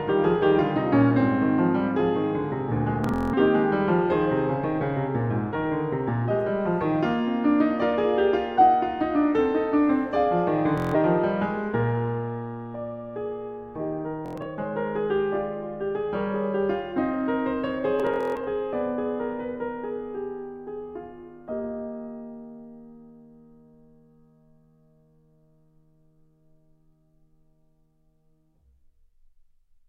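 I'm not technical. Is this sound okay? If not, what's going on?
No. Bluetooth stutter hits the music at 3.04–3.34, 10.78–10.96, 14.26–14.46 and 18.00–18.48 s: data arrived late, so the receiver repeated short slices, giving a brief buzzing stutter.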